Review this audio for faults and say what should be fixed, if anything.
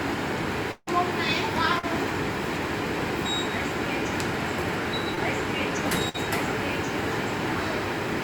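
From 0.71 to 0.89 s the sound stops and is replaced by about 155 ms of continued, fading sound, then about 40 ms of silence. When the audio returns, roughly 160 ms of material is gone. The likely cause is a long network dropout. Unlike a brief concealed loss, the fill runs long enough to decay fully into silence, and the audio resumes further on rather than picking up where it left off. A jitter buffer with more headroom, plus redundancy or FEC on the network path, would prevent it.

At 1.79 to 1.85 s and at 5.15 to 5.19 s there are short concealed packet losses, of 40 ms and 20 ms. The receiver covered each gap by extending the preceding sound, so each is heard as a quick smear or wobble before the real signal blends back in. These differ from a burst because they are shorter. Forward error correction or in-band redundancy would let the decoder rebuild these gaps instead of guessing at them.

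From 6.09 to 6.16 s a burst of packet loss removes about 40 ms of audio. The receiver spans the hole with about 51 ms of continued sound that weakens as it goes, giving a brief held, fading tail before the audio resumes past the missing section. It is longer than the single concealed losses and the fill audibly decays, but it never reaches the silence heard in the dropout. Interleaving packets, or sending redundant frames, would keep consecutive losses from wiping out a continuous stretch.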